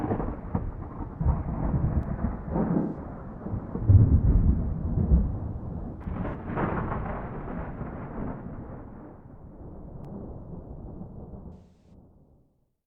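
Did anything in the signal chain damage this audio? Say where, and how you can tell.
Yes, two separate problems. First, overlapping chunks at the buffering stage. There are three small clicks or stutters, at 2.03, 6.04 and 10.05 s, spaced exactly 4 s apart. That regularity gives it away: the audio was handled in 4-second blocks, and each new block starts about 7 ms before the previous one finished, so a tiny slice plays twice at every join. It points to a driver or buffer handoff, not anything in the content.

Second, AAC frame loss with concealment, which happens in the codec or network path. There are three smeared, noisy or phasey patches. The first runs from 2.78 to 2.97 s, with about 128 ms missing. The second is shorter, 6.28 to 6.35 s, around 43 ms. The longest is 11.53 to 11.93 s, about 213 ms. Those gaps fit whole frames dropping out, and the decoder is papering over them by reusing the last good spectrum instead of going silent.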